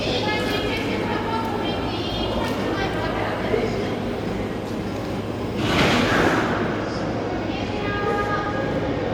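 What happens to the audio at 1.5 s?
Nothing goes wrong at 1.5 s; the sound continues intact through that moment with no dropout, click or other fault.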